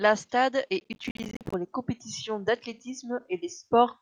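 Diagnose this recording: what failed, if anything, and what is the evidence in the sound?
The failure is at the driver or buffer stage: processor overload crackle from 0.80 to 1.54 s. Across that stretch the speech is torn by a dense run of tiny hard-edged silent gaps, dozens of them, each on the order of one buffer of around 10 ms. The processor repeatedly missed its deadlines, so unfinished buffers went out as silence. Unlike a single dropout, the gaps cluster into a gritty burst that ends once the load eases. Unlike clipping distortion, the crackle doesn't follow the loudness of the speech.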